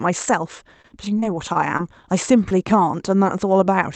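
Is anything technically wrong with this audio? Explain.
Yes, there are two.

Repeated packet loss (robotic sound) runs from 0.82 to 2.06 s. Seven short dropouts, the longest about 27 ms, were each patched by extending the previous sound, giving choppy speech with pieces missing.

Short concealed packet loss occurs at 2.49–2.53 s. About 20 ms never arrived and was filled by continuing the preceding sound, heard as a brief smear or wobble.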